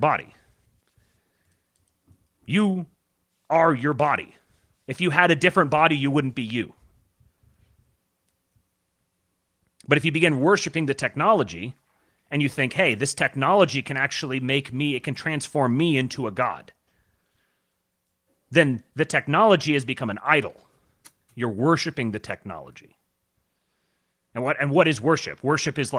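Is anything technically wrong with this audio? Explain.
No, nothing in this speech recording stands out as a technical problem. What you can hear is Opus voice compression in its hybrid mode, which keeps the full band and leaves only light coding marks, consistent with a rate of around 24 kbps.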